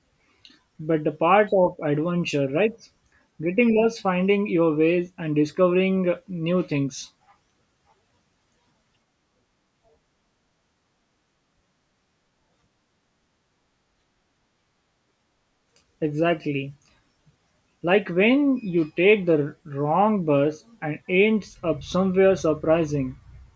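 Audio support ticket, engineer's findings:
No defects found in the speech recording on listening. Nothing to attribute to any component; no action needed.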